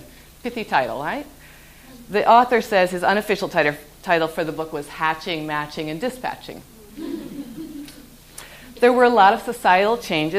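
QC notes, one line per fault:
No faults detected.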